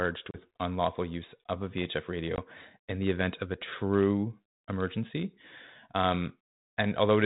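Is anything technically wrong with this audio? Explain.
Yes. At 0.31 s the speech drops into an abrupt, hard-edged gap of about 30 ms, and comes back just before "unlawful use of a" with brief roughness that fades within some tens of milliseconds. A shorter 20 ms hole at 2.36 s, just before "in the event of", does the same. This is packet loss on an ADPCM call. The missing packets were filled with silence, so the decoder's adaptive predictor and step size drifted from the sender's until they resynchronised. The light G.726 ADPCM grain throughout fits 32 kbit/s coding.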